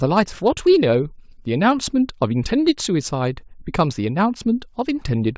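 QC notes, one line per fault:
No faults to note for this speech clip.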